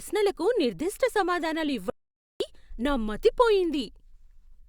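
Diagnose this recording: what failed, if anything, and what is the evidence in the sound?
Audio dropout to silence from 1.90 to 2.40 s: the speech cuts off mid-flow and returns at "నా మతి" after half a second of silence, with no room tone. The likely cause is a lost input link upstream of the recorder, which kept writing silence.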